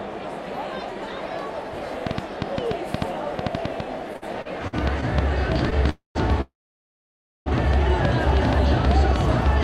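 From 2.07 s to the end, a train of clicks ticks over the sound at about six per second, unevenly spaced and peaking about 15 dB above the signal, likely from interference. These clicks appear as thin vertical lines on a spectrogram and as sharp spikes in the waveform.

Between 4.13 and 5.04 s, repeated stalls (stutter) occur: five short gaps, the longest 53 ms, are filled with repeated sound totalling 169 ms. This makes the audio drag, and the repeats appear as smeared, stretched patches.

At 5.90 to 6.17 s, a call audio freeze fills 255 ms, holding the last sound and then fading into 140 ms of silence, likely from late packets, showing as a flat gap. A second freeze from 6.41 to 7.48 s stretches to about 1.05 s, mostly silent for 950 ms, then resumes where it stopped.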